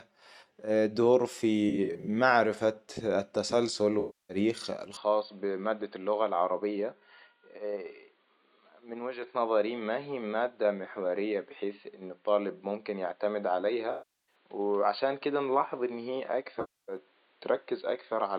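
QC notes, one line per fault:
1.69–2.08 s, 3.99–4.37 s, 13.91–14.35 s, 16.60–16.97 s: AAC frame loss with concealment. At 1.69 s about 192 ms of audio is missing in short bursts spread across 384 ms, none longer than roughly 40 ms, so the speech breaks into a smeared, flickering patch. The later losses total 0.30 s, 0.36 s and 0.28 s. In each, the decoder rebuilds the missing audio from the last good spectrum, which gives a noisy, phasey sound in place of clean speech.
4.97 s to end: input switched to a poorer device. With no gap at the switch, the speech suddenly turns dull and boxy, because nothing above 4.6 kHz gets through. The level drops by about 5 dB, and a new noise floor appears about 40 dB below the speech. The abrupt, lasting change in bandwidth, tone and level is most likely due to the system moving to a narrower-band microphone or headset call profile partway through.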